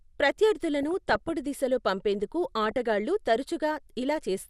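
Throughout the clip the speech is dull and grainy, with a gurgling quality and upper frequencies that come and go. This is MP2 compression damage, likely from a low-rate MPEG Layer II stream, and the degree of loss fits a rate of around 80 kbps. The coder has too few bits for its 32 sub-bands, so the upper bands are dropped from frame to frame and the bands that remain are coarsely quantised.

From 0.83 to 1.31 s, ending just before "దిశలో పంపేందుకు", DAB burbling comes in over the speech. Bit errors have got past the error correction into the MP2 data. Corrupted samples put short blips of noise in single sub-bands, and corrupted scale factors make sub-bands jump in level for up to a frame. The length of the burst suggests errors across many consecutive frames at a low error rate, a fraction of a percent. A shorter burst of the same DAB burbling follows from 2.66 to 2.86 s, just after "దిశలో పంపేందుకు".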